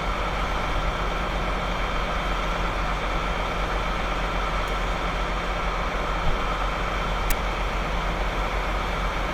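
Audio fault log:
7.30 s: file tags played as audio. A short chunk of text tags got read as if it were samples, so there's a loud, hard-edged rasp offset to one side. It's only about 12 ms long, a quick burst of static over the sounds.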